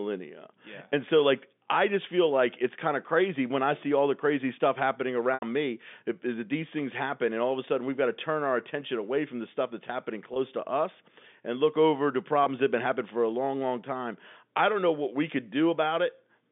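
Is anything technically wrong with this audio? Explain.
Yes. There are three dropouts from packet loss with pitch repetition. The first comes at 5.34 s, just after "the crazy stuff happening", and lasts about 80 ms. Others follow at 10.34 s, after "the stuff that's happening", and at 12.44 s, after "and look over to", each about 20 ms. The receiver bridges each gap by repeating the last pitch period. The short gaps sound like a briefly held, buzzy tone. The longer one fades toward silence before the speech cross-fades back. The narrow telephone band itself is normal for this line.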